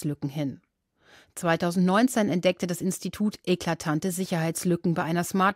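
No technical faults are audible.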